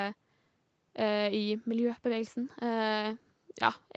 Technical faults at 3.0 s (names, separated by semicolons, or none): none